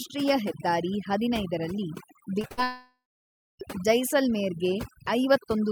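A speech recording with overdone noise removal throughout. The background drops and breaks up into twinkling specks. An aggressive noise reducer is pulling individual frequency bands down whenever they near its noise estimate, and quieter parts of the voice go with them.

Two short concealed packet losses follow close together, at 2.41 to 2.45 s and 2.47 to 2.52 s. Each drops about 20 ms of audio. The receiver patches each gap by extending the preceding sound, so each is heard as a brief smear or wobble.

A burst of packet loss comes straight after, from 2.52 to 2.59 s. About 60 ms is missing. The last sound is carried on and fades as a held buzz or hiss. The audio then jumps ahead.

From 2.63 to 3.61 s comes what is likely a long network dropout. About 960 ms of audio is lost. A fading continuation gives way to roughly 0.6 s of silence, and the speech resumes further on with that stretch gone.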